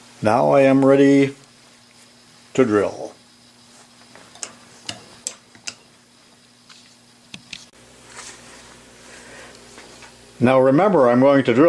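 No audible technical fault turns up anywhere in the recording.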